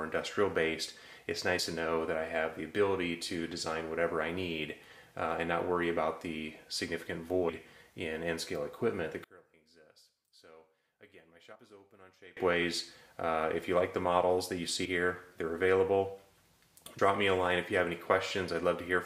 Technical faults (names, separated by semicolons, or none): compressed frames skipped; one channel inverted